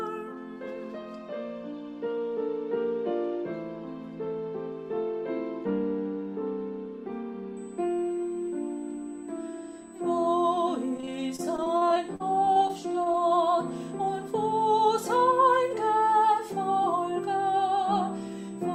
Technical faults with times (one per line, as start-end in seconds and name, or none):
7.57-18.74 USB whine
10.97-13.18 repeated packet loss (robotic sound)